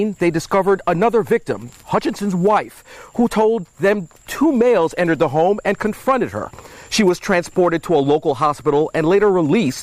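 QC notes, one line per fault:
No faults detected.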